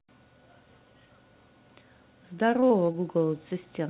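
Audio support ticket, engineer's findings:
Choppy stutter at 2.6–2.96 s, with small pieces of speech missing. Repeated packet loss: four short gaps, longest about 20 ms, each filled by extending the previous sound. Roughly a fifth of that stretch is concealed. The band stops near 4 kHz, consistent with a narrowband G.711 call path.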